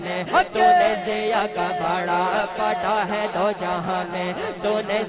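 Nothing here needs fixing, since there are no dropouts, glitches or other technical faults to point to anywhere in the recording.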